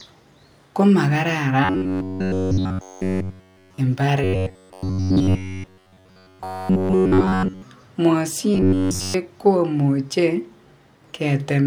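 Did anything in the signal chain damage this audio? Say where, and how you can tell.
Yes. Robotic sound from repeated short buffers occurs from 1.65 to 3.78 s, 4.24 to 7.62 s and 8.55 to 9.14 s. In each span the speech becomes a rigid, metallic buzz locked at 93.8 Hz, which fits a fragment of about 10.7 ms being replayed over and over. The stage is likely the driver or buffer: fresh audio arrived too seldom, so all of each stretch was filled with repeats while the real signal was skipped.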